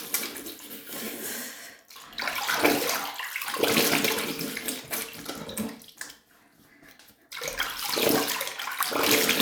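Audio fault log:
Listening across this recording of sounds turns up no faults. Nothing in it needs a timed entry.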